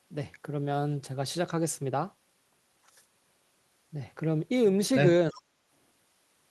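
From 5.31 to 5.42 s there is an echo leak: a faint copy of the speech returns about 338 ms late, well below the direct sound, likely a loudspeaker echo the far end's canceller missed. Its fixed delay sets it apart from room reverberation. Over 5.31 to 5.48 s the speech is also suppressed in double talk. It dips by as much as about 25 dB for roughly 150 ms, likely because the canceller turned down both voices while they overlapped. Unlike a dropout, the speech sinks rather than vanishing into silence.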